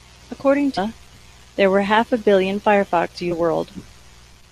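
Damaged data in the compressed stream makes the decoder lose sync and search for the next frame, leaving brief glitches in the speech at 0.77 s and 3.31 s.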